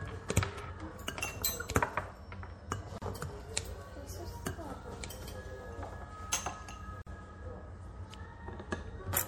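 The whole clip has that watery, swirly MP3 compression sound, with smeared attacks and dulled treble, likely from a low-bitrate encode around 64 kbps. At 2.98 s and again at 7.02 s, every 4 s, there's a gap at a join of encoded pieces: silences of about 36 ms and 49 ms, where separately encoded chunks were butted together with their padding left in.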